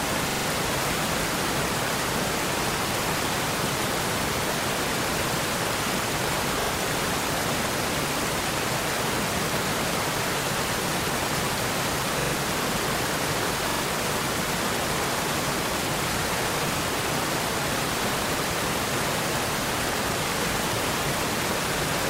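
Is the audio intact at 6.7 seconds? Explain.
No. A repeated buffer runs from 6.61 to 6.70 s. New audio did not reach the output in time, so the same piece of about 43 ms was played twice more, which fits a 2048-sample buffer. It is heard as a short stutter, three identical copies with a hard join at each seam. Unlike a dropout, there is no silent gap, and essentially no audio is lost. What follows simply arrives late.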